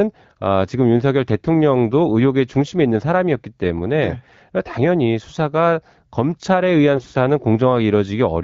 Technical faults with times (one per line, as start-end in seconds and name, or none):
6.96-7.14 AMR bit errors